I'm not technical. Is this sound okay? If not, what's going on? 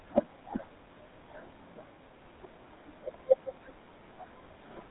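No. The whole recording has passed through the GSM full-rate codec, the original mobile-phone voice coding, which rebuilds the voice from a simplified model. Everything sounds buzzy and gravelly, not just muffled like a landline, and nothing above 4 kHz comes through.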